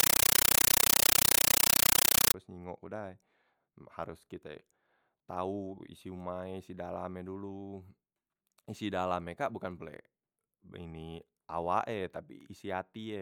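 Speech, opening with very loud, chattering static from 0.0 to 2.34 s, just before "nyingok ke dai": noise bursts about 9.3 ms long repeating 31.25 times a second. This is a compressed stream played as audio, an undecoded Dolby Digital bitstream treated as samples, which fits a 448 kbps AC-3 stream.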